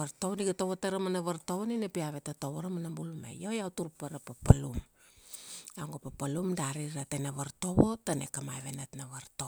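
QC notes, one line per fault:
No fault was found.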